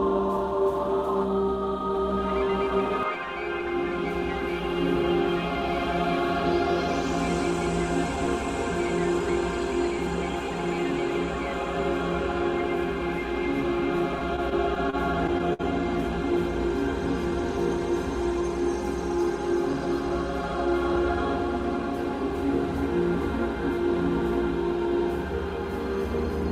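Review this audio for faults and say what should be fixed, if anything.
Between 14.19 and 15.61 s the sound drags and hitches eight times, each hitch stretching the last moment of audio over a wait of up to 57 ms, about 156 ms in all. These repeated stalls (stutter) happen because packets arrived late, so the jitter buffer kept running empty. Nothing is lost, only delayed. A larger or adaptive jitter buffer would prevent this.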